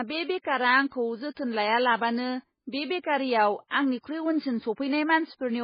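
Throughout the speech, heavy MP3 compression is the likely cause of a dull, watery sound with swirling artefacts, consistent with a very low bitrate around 16 kbps. Nothing survives above 5 kHz. A spectrogram shows a flat ceiling there, with patchy, flickering gaps below.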